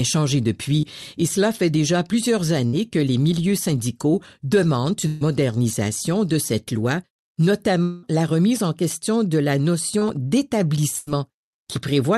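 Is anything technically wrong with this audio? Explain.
Yes. There are brief smears at 0.81 to 0.85 s and 9.99 to 10.03 s, each about 20 ms. These are short concealed packet losses, where the receiver continued the last sound to cover the missing audio.

Fading fills of the last sound appear at 2.67 to 2.75 s, 5.07 to 5.23 s and 10.99 to 11.09 s, lasting about 60, 140 and 80 ms. Each is a burst of packet loss. The decoder extended and faded the last sound, and the audio resumes with that stretch gone.

From 7.83 to 8.05 s, a fading continuation of the last sound fills roughly 200 ms before the audio resumes further on, likely a long network dropout concealed by the decoder. The Opus call path itself shows its usual coding with high frequencies cut above 12 kHz.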